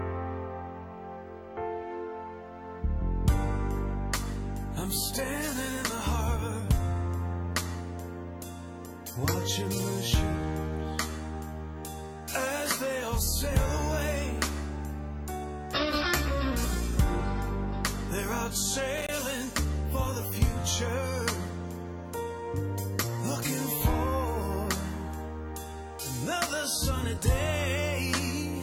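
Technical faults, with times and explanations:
18.97–19.16 s, loose connector crackle: an intermittent contact chops the signal into a brief scratchy burst, seen as jagged gaps and spikes in the waveform and broadband vertical streaks on a spectrogram.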